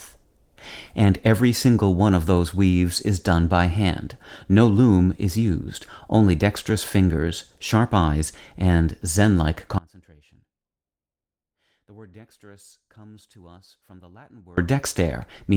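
At 9.78 s the speech cuts out abruptly for about 4.8 s until 14.57 s. This is an audio dropout to a faint residue. Only faint sound remains, roughly 30 dB below normal level. It is likely a lost signal on a path that stayed live.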